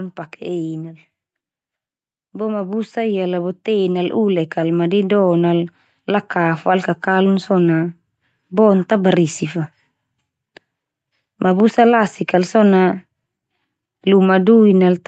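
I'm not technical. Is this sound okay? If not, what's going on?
No. From about 2.3 s to 7.6 s the level climbs steadily, a fault known as automatic gain rising. The call's automatic gain control judged the incoming speech too quiet and kept turning it up over those five seconds, so the voice and the background noise behind it swell together rather than the voice alone getting louder. The dulled top end from the call connection is ordinary for a call and isn't part of the problem.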